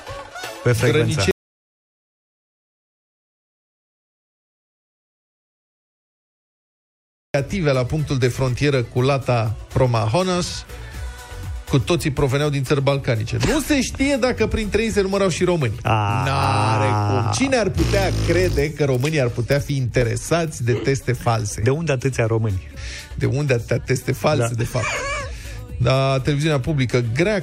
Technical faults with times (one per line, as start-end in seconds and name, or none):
1.31-7.34 audio dropout to silence